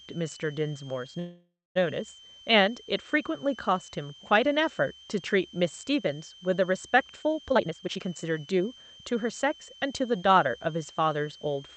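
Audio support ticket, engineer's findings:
Whistle, throughout. Steady high tone, roughly 3 kHz, drifting between 2.99 and 3.24 kHz, roughly 25 dB under the speech. Switching power supply whistle. Supply in audible burst mode or beating with another converter. Pitch wanders with load.

Gap at 1.19–1.77 s. Last sound held and fading, then about 0.23 s of silence. Speech resumes where it stopped, nothing lost. Likely a call audio freeze: packets delayed, jitter buffer ran dry, receiver filled 560 ms. Delay now 0.56 s longer.

Hurried speech, 7.50–8.99 s. Runs at 138% speed, pitch unchanged. Jitter buffer speed-up: buffer overfull after late packets arrived together. Receiver cut short pitch-period chunks repeatedly, roughly half a second in total, to pull delay back down. Opus call path, band-limited at 8 kHz.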